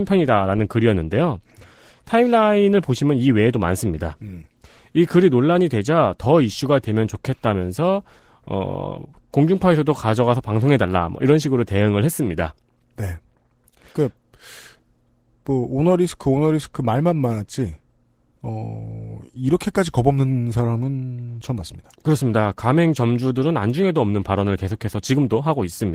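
Throughout the speech, Opus voice compression is running at a low rate, which fits about 16 kbps in hybrid mode, with SILK coding the lower band and CELT above 8 kHz. The coarsely coded excitation leaves the voice plainly hoarse and slightly robotic.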